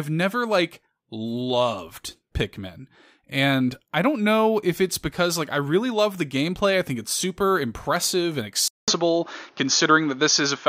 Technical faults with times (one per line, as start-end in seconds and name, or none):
8.68-10.69 input switched to a poorer device